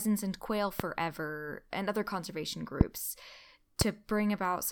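Three loud pops cut through the speech: from 0.80 to 0.82 s, from 2.81 to 2.83 s just after "and other conservation", and from 3.81 to 3.84 s, each a single sharp burst roughly 20 to 25 dB above the speech. The likely cause is an electrical pulse from a plug, switch or static discharge. Unlike a dropout, the speech carries on beneath each pop with nothing missing.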